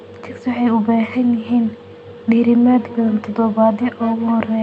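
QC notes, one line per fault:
2.7–4.62 s: feedback echo between two devices. Speech repeats roughly every 0.4 s, about 19 dB down. A second device replays it into the microphone.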